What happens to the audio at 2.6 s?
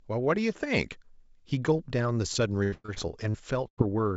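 At 2.6 s you're in repeated packet loss, 2.32 to 3.8 s: seven gaps get patched by stretching the last sound, so it turns choppy and robotic.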